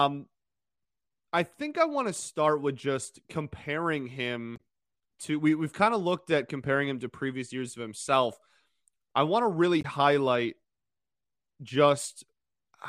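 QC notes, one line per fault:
4.56 to 4.60 s, damaged data in a compressed stream: a brief glitch after "start with just comparing" as corrupted frames throw the decoder out of sync; playback resumes at "to we we've kind".
9.81 to 9.85 s, damaged data in a compressed stream: the same roughly 40 ms blip after "I want to really", where the decoder misreads bad frames and skips ahead to the next valid header.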